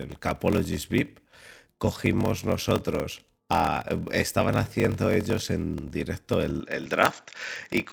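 From the start of the speech to the end, a block size mismatch (padded) runs throughout. One stage delivers shorter blocks than the next stage consumes, and each shortfall is filled with zeros, so a brief gap recurs at a steady 41.7 Hz, heard as a low buzz under the speech. The delivery is slowed to 0.889 times normal speed. This fits 1024-sample blocks read as roughly 1152-sample blocks.

At 6.61 s, just after "haciendo ellos en directo", the tone changes abruptly and stays changed to the end. The speech turns duller, and a new background noise floor sits about 45 dB below the speech. There is no gap at the change and no noticeable level jump. This is likely an input switched to a poorer device, such as a different microphone or a headset call profile with a narrower band and its own noise.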